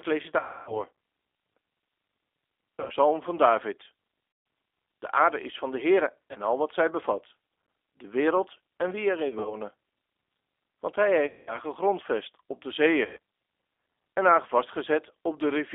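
The whole speech clip runs through a G.729 codec at 8 kbit/s. The line passes only about 250 Hz to 3.6 kHz. Everything above is gone, and low warmth is thin. The codec rebuilds each short frame from a filter, a pitch guess and a few pulses. That leaves the voice plainly rough and slightly synthetic throughout.

Seven gaps follow, each marked by VoIP packet loss concealed by the speech codec. The decoder repeats its last pitch and filter and lets the level sink. The first is 0.39 to 0.83 s. About 280 ms is lost, and it is stretched into a fading concealment sound. Then come 2.80 to 2.92 s, with 100 ms lost, and 4.32 to 4.46 s, with 140 ms lost. A brief 20 ms dropout sits at 6.33 to 6.37 s, just before "al wat zij bevat". From 9.29 to 9.56 s, short 20 ms holes are scattered, 60 ms in all. At 11.27 to 11.59 s, 200 ms is lost just before "gegrondvest op de". The last gap is 13.05 to 13.18 s, with 120 ms lost, right after "gegrondvest op de". 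After the longer gaps, the voice stays weak and distorted briefly as the decoder recovers.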